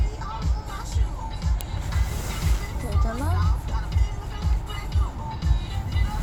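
At 1.61 s, two separately stored pieces of audio were joined without stripping the WAV header from the second one, so that short block of file metadata was sent to the output as if it were sample data. Those few dozen bytes have no relation to the surrounding waveform, and the result is a file header played as audio: a single sharp, loud click that snaps through the sound at that instant, independent of what the signal itself is doing.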